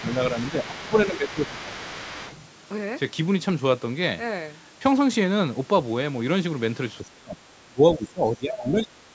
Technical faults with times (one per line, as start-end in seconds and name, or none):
0.00-1.70 speech suppressed in double talk
0.08-2.48 other side's voice leaking through
7.02-9.15 speech suppressed in double talk